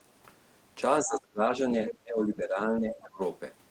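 From 1.01 to 1.64 s the speech sinks and thins, falling by around 25 dB at its deepest and breaking into pieces for about half a second in all. This is speech suppressed in double talk: the far end was likely talking at the same moment, and the echo canceller, unable to tell this talker from loudspeaker echo, turned the whole signal down. The same thing happens again from 1.92 to 3.2 s, with a drop of roughly 20 dB spread over about a second of the talker's speech.

As that second dip begins, between 1.88 and 1.94 s, a brief scrap of a second voice comes through, sitting about 10 dB below the talker. That is the other side's voice leaking through, likely because the far end played on this device's loudspeaker and the echo canceller did not remove all of it from the microphone.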